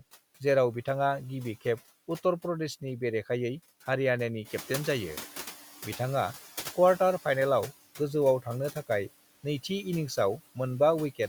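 Noise suppressor artifacts run through the whole speech clip: steady background noise is cut by about 10 dB frame by frame, leaving a residue that dips between words. At 4.44 s the room noise jumps by about 11 dB, and the noise suppressor is caught catching up: the louder noise leaks through until 5.6 s, then settles about 9 dB lower as its estimate adapts.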